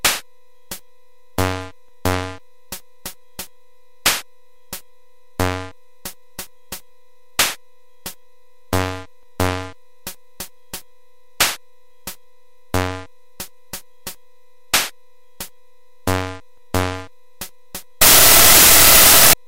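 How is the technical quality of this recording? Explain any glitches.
The recording has one glitch near the end; the rest is not assessed here. From 18.02 to 19.33 s there is a wrong sample width fault. Packed 24-bit samples are read as 32-bit, so each value mixes bytes from neighbouring samples. The result is loud noise with the original sound buried in it, running 1.33 times too fast and raised in pitch. That speed and pitch shift sets it apart from plain added noise or clipping.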